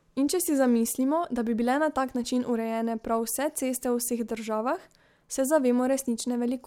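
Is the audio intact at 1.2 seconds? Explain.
Yes, at 1.2 seconds the speech plays through intact, with no dropout, click, distortion or other fault at that point.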